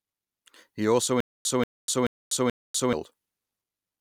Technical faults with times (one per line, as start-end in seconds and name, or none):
1.20-2.93 stutter with silent gaps